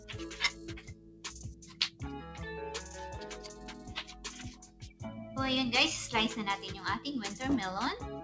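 A speech-tuned noise suppressor is running on non-speech sound for the whole clip. It treats sustained tones and decaying tails as noise and pulls them down. Level swings by around 15 dB as it reacts. Attacks pass through, but held material sinks, so the sound pumps and thins. You hear sound cut by the noise suppressor at 0.53–1.24 s, 1.53–2.01 s and 4.53–5.01 s, with drops of about 10 dB. Shorter dips come at 3.53–3.91 s (about 6 dB) and 4.08–4.24 s (about 4 dB). In each, a sustained or fading part is squashed or its decay is clipped short. The audio also carries a call codec's coding texture with nothing above 8 kHz, which fits G.722 at 64 kbps over a WebRTC call path.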